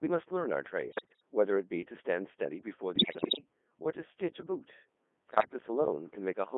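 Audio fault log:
throughout, Codec 2 vocoder: the decoder rebuilds speech from sine waves, using only pitch, voicing, energy and envelope. This fits the 3.2 kbit/s mode. The result is heavily robotic and buzzy, confined to 200 Hz to 3.5 kHz.
0.88–1.22 s, 2.96–3.38 s, 5.30–5.53 s, bit errors on digital voice radio: flipped bits corrupt whole vocoder frames, worst in the first burst, so pitch, level and tone lurch into bleeps, warbles and gibberish.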